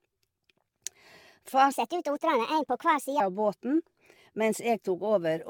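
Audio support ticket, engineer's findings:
Generation loss throughout. Swirly, smeared, hollow speech; consonant attacks blurred. Likely repeated AAC-LC decode and re-encode, around seven passes at 96 kbit/s. Each pass quantises on a shifted frame grid, so the noise and spectral holes stack.

Section at the wrong speed, 1.72 to 3.20 s, ending just before "av båten". Speech hurried and raised, 1.34x, roughly five semitones up. Pitch and tempo shift together. Likely an edit or playback stage running that segment on the wrong clock.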